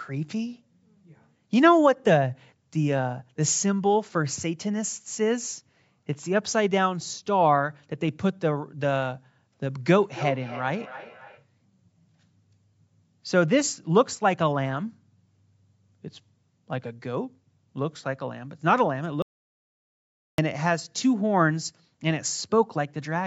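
From 9.86 to 11.47 s, a feedback echo between two devices appears: a second device in the room replays the call audio into the microphone, and the echo canceller cannot remove it. The speech returns at intervals of roughly 300 ms, thinner and ringing, peaking at about 15 dB below the speech.

From 19.22 to 20.38 s, input to the recorder was likely lost while it kept writing zeros, causing an audio dropout to silence. The speech cuts off mid-flow for 1.16 s of total silence with no room tone, and whatever was said then is gone.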